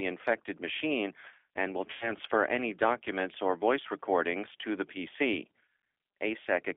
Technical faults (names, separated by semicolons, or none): G.729 codec; VoIP packet loss concealed by the speech codec